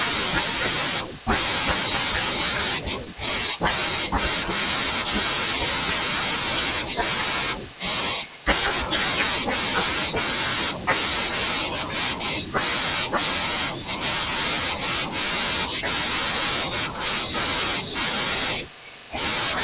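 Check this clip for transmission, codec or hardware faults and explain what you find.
One fault affects the speech, heard against the call path's narrowband G.711 sound with nothing above 4 kHz. Scattered short gaps, 3.05 to 4.12 s: around seven tiny holes from lost or late packets were filled by extending prior sound, leaving brief ticks and smears that show as short repeated waveform cycles.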